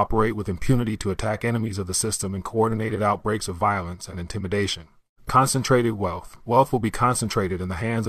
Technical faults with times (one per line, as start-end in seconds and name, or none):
6.43-6.47 compressed frames skipped